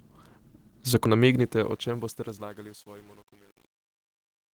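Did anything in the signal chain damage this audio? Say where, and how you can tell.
Yes. At playback from disc, a CD skip lands at 1.05 s: a brief mute of roughly 5 ms, after which the speech resumes from a different point on the spiral. The signature is the jump in continuity, not just the click, which separates it from a dropout or buffer underrun where the audio picks up where it left off. Any displacement would be a whole number of disc revolutions, about 0.1 to 0.3 s each.

At the sample-format stage, truncation distortion on a fade sets in from 1.23 s as the level falls away in a fade-out. The gain stage is keeping only about 9 bits with no dither, so from 1.86 s to the end the quiet tail turns into coarse staircase steps and sounds gritty. A clean fade would just get quieter. The grain is level-dependent, which rules out codec artefacts from the Opus stage, whose light coding stays steady throughout.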